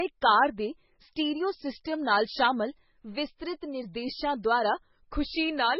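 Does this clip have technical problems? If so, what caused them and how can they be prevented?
Yes. Throughout the speech, nothing is present above 5.6 kHz, which fits an MP3 first encoded at around 16 kbit/s. The likely cause is low-bitrate audio saved at a high bitrate, since re-encoding cannot restore removed content. Encode once, from the original, at adequate bitrate.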